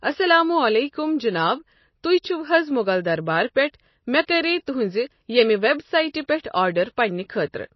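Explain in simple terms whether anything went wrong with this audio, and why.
Throughout the speech, from start to finish, there is plainly audible damage of the kind MP3 compression leaves, which is the likely cause. Nothing is heard above about 5.8 kHz, so s sounds and breathy detail lose their crispness and the sound turns dull. The encoder was short of bits, so faint parts of the sound drop in and out from moment to moment, giving a watery, swirling texture and smeared starts to sounds.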